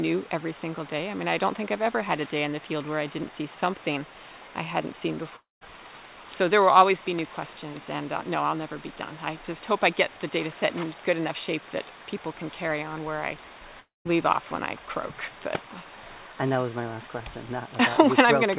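At 5.36 s the sound breaks off until 5.70 s. It breaks again from 13.80 s to 14.17 s. Each time, a fading buzz continues the last sound for about 250 ms. Silence follows for 160 ms, then 170 ms. About 260 ms is lost each time. The likely cause is a long network dropout, with the receiver filling the gap before the audio resumes, all through a G.711 mu-law call path with nothing above 4 kHz.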